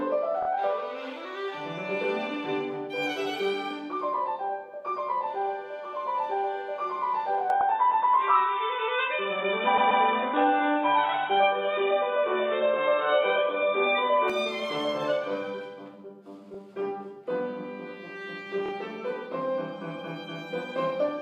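The audio stutters in five places, where a short stretch of repeated frames plays again: at 0.42 s and 18.65 s a 26 ms block plays twice more, at 7.60 s a 78 ms block repeats once, at 9.77 s a 131 ms block comes back twice more, and at 16.54 s a 26 ms block repeats once. The 26 ms unit fits single MP3-sized frames being written or sent more than once. Together the repeats stretch the clip by nearly half a second. Between 7.50 s and 14.30 s the sound goes dull and boxy, with nothing above 3.8 kHz, a level change of about 5 dB, and a faint new noise floor well below the signal. There's no gap at either edge. That's most likely the input switched to a poorer device, such as a headset's call profile, and then back again.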